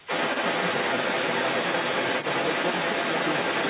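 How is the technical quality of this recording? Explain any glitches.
Not clean: the other side's voice is leaking through for the whole clip, from 0 to 3.7 s, at roughly 10 dB relative to the talker. That's likely residual echo the canceller missed from the loudspeaker. The narrowband sound, with nothing above 4 kHz, fits a G.711 A-law call path at 64 kbps.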